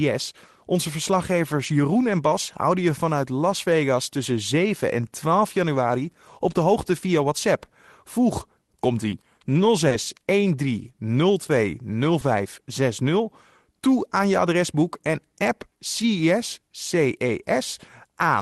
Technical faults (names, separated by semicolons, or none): short concealed packet loss